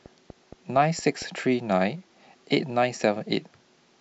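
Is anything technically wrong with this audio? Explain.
Yes, there's a train of clicks at the start, from about 0.06 to 1.23 s. Roughly seven sharp pulses tick along at a steady 4.3 per second, each about as loud as the speech itself. They're evenly spaced and all have much the same shape, which suggests something periodic, likely interference from nearby gear or a faulty connection or power supply, rather than random handling noise.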